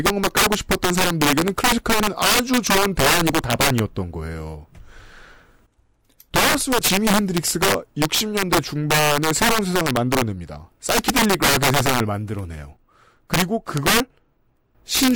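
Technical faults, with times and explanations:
Throughout: integer overflow. The speech is driven about 9 dB past the top of the integer range, and instead of being held at the limit, every peak that exceeds it wraps around to the opposite extreme. A few percent of samples land there, so loud syllables break into violent, crackling snaps rather than the flattened, buzzy roughness of clipping. The sign-flipping jumps across the full range are what make it so much harsher.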